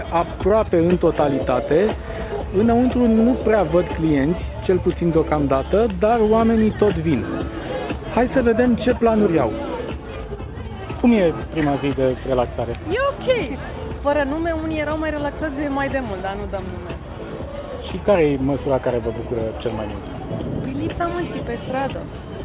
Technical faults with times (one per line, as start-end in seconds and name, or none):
none